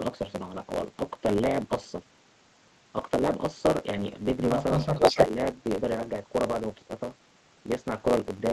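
Throughout the clip, one stage writes longer blocks than the next one reads, which fits a 512-sample buffer, and the tail of each block is discarded. The block size mismatch (truncated) leaves a steady buzz near 91.9 Hz and makes the speech run about 1.07 times fast.

From 4.96 to 5.26 s, a delayed copy of the speech arrives about 298 ms late, roughly 10 dB louder than the speech itself. This is an echo leak, likely from a far-end echo canceller that failed to remove its loudspeaker pickup before sending it back.

Overlapping that, from 5.12 to 5.38 s, the talker's speech dips by up to roughly 10 dB across about 200 ms in total. This is speech suppressed in double talk: while both sides were active, the canceller likely could not separate the two and turned the talker down along with the echo.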